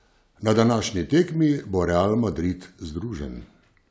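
No technical faults can be heard in the clip.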